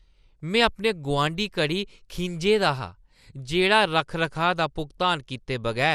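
Speech, degraded throughout by what is likely MP2 compression: the sound is dull and the top end flickers in and out as upper sub-bands drop away, leaving a gurgling, granular edge from coarse quantisation, which fits a low rate around 80 kbps.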